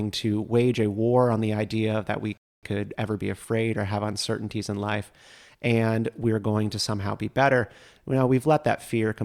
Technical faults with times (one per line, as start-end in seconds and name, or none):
2.37-2.63 rebuffering stall